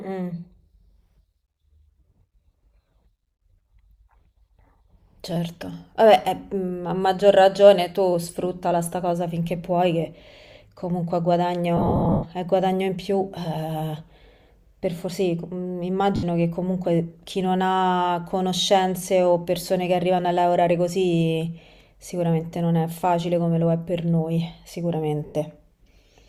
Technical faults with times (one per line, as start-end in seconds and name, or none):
11.77-12.26 lost LE Audio frames
16.16-16.23 lost LE Audio frames
25.26-25.35 lost LE Audio frames